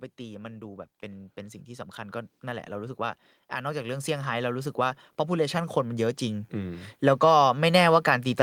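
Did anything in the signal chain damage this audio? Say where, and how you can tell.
Yes. From 0.17 s to 7.78 s the speech and the background noise swell together, climbing steadily by about 16 dB. That is automatic gain rising in the call processing stage: the gain control judged the input too quiet and kept turning it up over several seconds.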